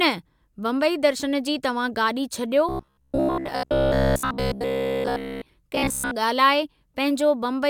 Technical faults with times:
2.69-5.49 robotic sound from repeated short buffers
5.75-6.11 robotic sound from repeated short buffers

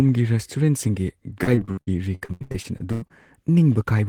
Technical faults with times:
1.43-3.12 repeated packet loss (robotic sound)

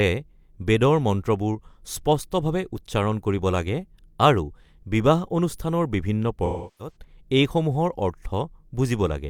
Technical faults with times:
6.45-6.96 AAC frame loss with concealment

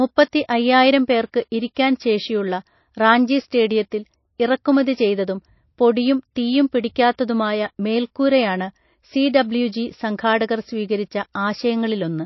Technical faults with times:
0.00-12.25 MP3 compression
0.28-12.00 clock slip clicks
1.75 pre-echo
4.38 pre-echo

